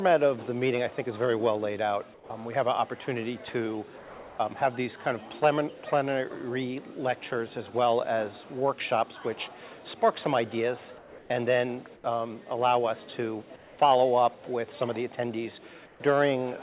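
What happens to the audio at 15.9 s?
From 15.86 to 16.0 s, a stretch of about 140 ms, the background turns into a steady, featureless hiss about 3 dB quieter than before, losing the texture it had while sitting about 29 dB below the loud parts. That is comfort noise in place of the background: the sending side likely stopped transmitting during the pause, and the receiver filled the gap with generated noise roughly matched to the background's level and shape, which is band-limited to 4 kHz like the rest of the call audio.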